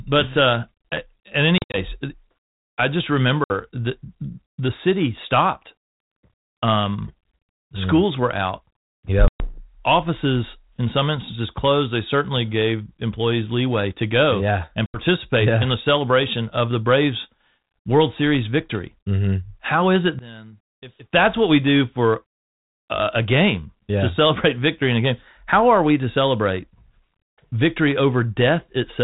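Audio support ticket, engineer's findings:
Packet loss on an ADPCM call, 1.58–1.78 s, 3.44–3.51 s (after "I just"), 9.28–9.58 s, 14.86–14.99 s (between "to go yeah and" and "yeah in the celebration"). Hard-edged silent gaps, from 60 to 120 ms each. At 1.58 s the dropouts are scattered over 160 ms, longest run 60 ms. Each hole drops a handful of packets. The G.726 decoder's predictor and step size lose track of the sender, so the speech resumes with brief distortion.

One channel inverted, 20.19–21.13 s, between "is it" and "what we do for". The level falls by about 20 dB, and the speech nearly vanishes, leaving a faint copy, likely from a polarity flip on one stereo channel cancelling the common content in a mono fold-down.

The 32 kbit/s G.726 path itself shows only light coding noise and the usual 4 kHz band limit.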